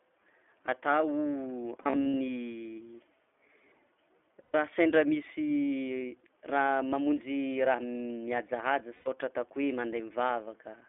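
Speech throughout sounds narrow and slightly rough and synthetic, with nothing below about 300 Hz or above 3.4 kHz. The damage is plainly audible. That is the sound of the iLBC codec over a telephone-band line. It codes each short frame's excitation on its own, with a frame length that fits 20 ms and a quality consistent with its 15.2 kbps mode, so fine detail is lost and a buzzy, artificial edge remains. Three times the sound stalls into a held, faintly buzzy or breathy vowel before snapping back clean. From 1.82 to 2.14 s the stalls are scattered, adding up to about 180 ms, the longest around 70 ms. From 4.43 to 4.55 s the stall lasts 120 ms, just before "sendra misy raha mamonjy". From 8.94 to 9.08 s it is another 120 ms, right after "raha mamonjy raha mihajahaja". These are lost iLBC frames. The decoder fills each gap by repeating the last pitch cycle mixed with noise, and since frames stand alone, the voice recovers at once.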